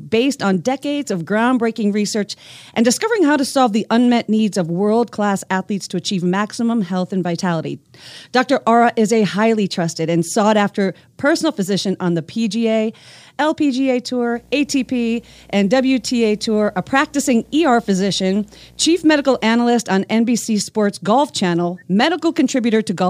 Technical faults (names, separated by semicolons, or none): video or display buzz